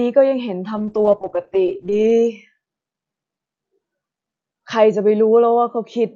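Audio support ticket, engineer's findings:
Call bitrate drop from 0.79 s to end: bandwidth estimate fell, encoder starved, sound consistent with roughly 64 down to 9 kbps. Speech turns coarse and watery, highs cut above 8 kHz, lowest rate for about 1.4 s, not fully recovered by end.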